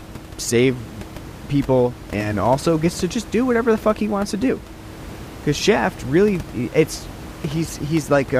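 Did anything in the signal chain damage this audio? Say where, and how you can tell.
No, nothing in the signal chain has damaged this speech; the only thing under it is the room's own background noise, sitting about 16 dB below the voice, which was captured at the microphone along with the speech.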